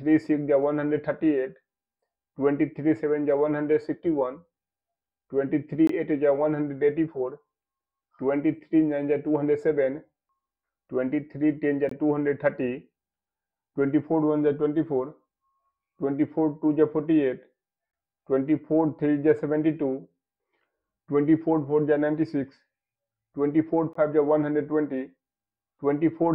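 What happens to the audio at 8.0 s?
Nothing goes wrong at 8.0 s; the audio plays through that moment intact, with no dropout, click or distortion.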